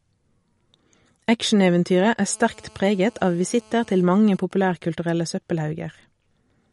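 A speech recording with plainly audible watery, swirly smearing throughout and nothing above 11.2 kHz, likely MP3 compression at a low bitrate around 48 kbps, which cuts the treble and drops weak detail. From 2.30 to 4.02 s a hard, raspy 217 Hz buzz rich in harmonics sits about 31 dB below the speech. This is GSM phone buzz from a nearby 2G handset in a call, whose radio bursts are rectified by the audio circuit. From 4.03 to 5.12 s it becomes even ticks with a longer 217 Hz buzz twice a second, roughly 30 dB down. These are GSM signalling bursts, sent while the phone's user falls silent during the call.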